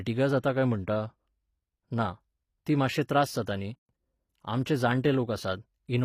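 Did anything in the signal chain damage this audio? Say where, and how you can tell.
Yes. The codec stage left its mark across the whole clip, and the damage is plainly audible. Nothing remains above 15.5 kHz, and the top of the spectrum has the rebuilt quality of spectral band replication: lower bands are copied upward and shaped by a coarse envelope, so the harmonics fail to line up above the crossover. This is likely HE-AAC compression, and the sound fits HE-AAC v2 at around 24 kbps.

The same codec also produces a pre-echo at 3.46 s, just after "ना ती मात्शे त्रास". It appears as a brief hiss of about 15 ms that arrives ahead of a sharp onset, and the attack itself sounds softened. The transform spreads quantisation noise across its whole block. When the attack lands late in the block, noise sized for the loud part spills into the quiet moment before it.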